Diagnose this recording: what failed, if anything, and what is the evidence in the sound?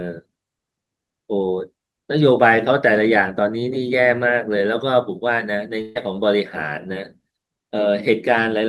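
From 5.81 to 5.97 s the speech stops advancing: the last sound is held and fades for about 140 ms, then resumes with roughly 140 ms of speech missing. This is a burst of packet loss at the network stage, with the receiver's concealment extending the final received sound across the gap.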